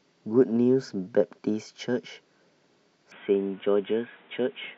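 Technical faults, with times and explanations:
3.12 s to 4.77 s, input switched to a poorer device: from 3.12 s to the end, the speech turns abruptly dull and boxy, with nothing above 3.8 kHz, while its loudness stays about the same. There is no gap at the change. A faint new background noise, roughly 30 dB below the speech, appears with it. The likely cause is the system moving its input mid-recording to a narrower-band microphone or a headset's call profile, which brings its own tone and noise.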